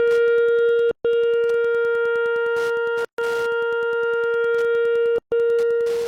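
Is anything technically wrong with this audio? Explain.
Yes, there are two faults in this music clip.

Wi-Fi interference runs throughout: a steady ticking roughly ten times a second, sitting around 25 dB below the music. A nearby Wi-Fi radio's beacon, repeating every 102.4 ms, is being rectified by the audio circuitry and heard as clicks.

There are also gaps at the joins of encoded pieces. The music drops to silence at 0.91 to 1.05 s, 3.05 to 3.18 s, and 5.18 to 5.32 s, each about 135 ms, then resumes where it stopped. The two-second spacing shows separately encoded segments joined without trimming encoder delay and final-frame padding.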